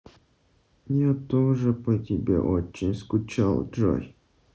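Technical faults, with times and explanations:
The speech sits within the roughly 8 kHz band of a Bluetooth mSBC headset link, with only the light grain on louder syllables that this wideband headset codec normally leaves, and nothing in the signal stands out as a technical problem.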